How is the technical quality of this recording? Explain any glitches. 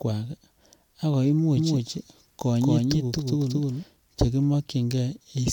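The recording has one clear fault, a doubled audio track, from 1.57 s to 3.83 s. The likely cause is a second, slower capture path feeding the same speech into the mix. The copy arrives roughly a fifth of a second late and at about equal loudness. The result is a hard, dry echo with no room decay that cuts in and out abruptly.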